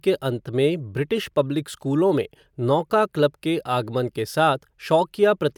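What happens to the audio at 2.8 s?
Nothing goes wrong at 2.8 s: the speech carries straight through that point without any dropout, click, glitch or other audible fault.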